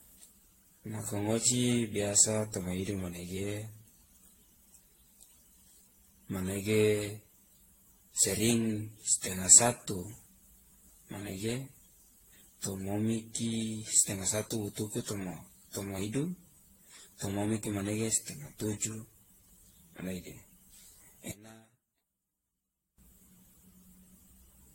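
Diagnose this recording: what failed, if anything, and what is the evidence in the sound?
Throughout the speech there is generation loss at the codec stage: the sound is swirly, smeared and hollow, with softened consonant attacks, and nothing exists above about 16.6 kHz. That is worse than a single 64 kbit/s AAC-LC pass would explain, and the likely cause is around ten rounds of re-encoding. Each pass requantises on a shifted frame grid, so the errors stack. A spectrogram shows a hard ceiling, flickering holes in the upper bands and blurred onsets.

From 21.32 to 22.98 s the level falls by about 24 dB and the centred speech nearly disappears, leaving a faint residue. This points to one channel inverted, most likely at the wiring or mixing stage, heard here through a mono fold-down. With one channel's polarity reversed, the content common to both channels cancels when they are summed. On the waveform the envelope collapses abruptly over that span.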